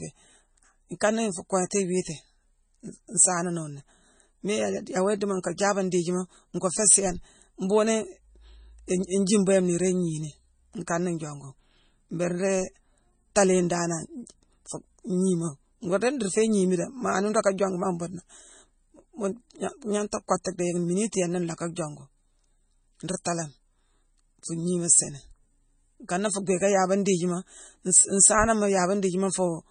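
MP3 compression runs through the whole clip. Nothing is heard above 9.4 kHz, and the speech has a watery, swirling texture with metallic edges on s sounds. The damage is heavy, which fits a low bitrate of around 24 kbps, where the encoder likely ran short of bits, cut the treble and let weak frequency lines flicker between frames.

Pre-echo appears at 1.00 s. A short hiss of about 11 ms comes just before a sharp onset, which sounds softened. The codec spread its coding noise across the whole block, so noise meant for the loud attack leaked into the quiet moment before it.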